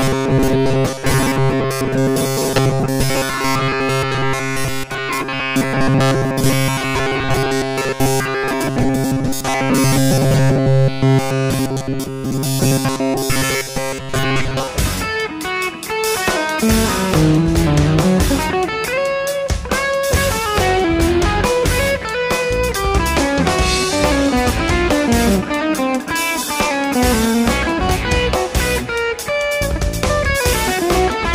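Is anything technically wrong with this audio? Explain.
Yes. From 0.01 s to 14.69 s there is robotic sound from repeated short buffers. New audio is likely arriving too seldom, so the playback side keeps filling the gaps by looping a short slice of what it last received, about 7.5 ms long, while the real material in between is dropped. For most of that stretch the output is these repeats, which impose a fixed 134 Hz buzz. The result is a rigid, metallic buzz that only loosely tracks the underlying sound.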